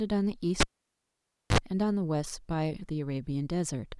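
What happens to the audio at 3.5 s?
Nothing goes wrong at 3.5 s; the speech there is intact, with no dropout, click, distortion or other audible fault.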